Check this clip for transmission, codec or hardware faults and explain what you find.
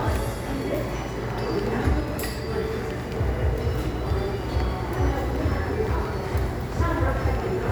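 No transmission, codec or hardware faults can be heard anywhere in this recording of sounds, and the signal stays continuous and stable throughout.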